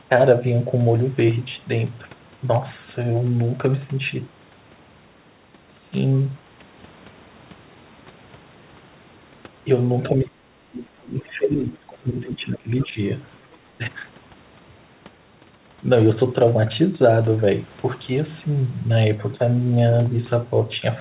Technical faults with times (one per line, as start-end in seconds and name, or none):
10.10-12.98 speech suppressed in double talk
12.80-12.87 other side's voice leaking through